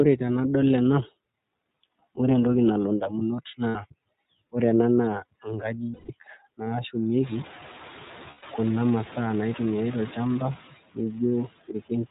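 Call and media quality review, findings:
Noise suppressor artifacts: suppressor gating steady-noise bands frame by frame, cutting noise about 14 dB. Background dips between phrases and swells under speech.

iLBC codec: narrowband path, nothing above 4 kHz, and a rough, slightly synthetic timbre that is plainly audible throughout. Bandwidth and texture fit iLBC at about 13.33 kbps, which points to 30 ms framing.

Lost iLBC frames: packet loss with decoder concealment at 3.69–3.76 s (60 ms), 5.93–6.11 s (150 ms) and 8.30–8.44 s (120 ms), the last just before "kuna masaa". The decoder repeats the last pitch cycle mixed with noise, so each gap sounds like a held, buzzy-breathy vowel. The longer gaps fade, and speech recovers immediately afterwards because frames decode independently.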